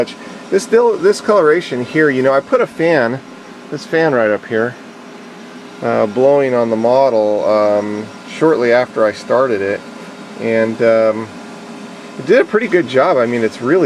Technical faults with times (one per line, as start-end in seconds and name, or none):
none